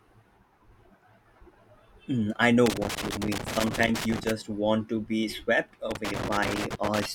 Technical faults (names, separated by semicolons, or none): loose connector crackle